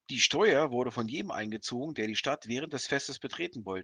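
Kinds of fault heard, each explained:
No technical fault can be heard anywhere in the speech. The recording gives no sign of anything to list under any kind of fault.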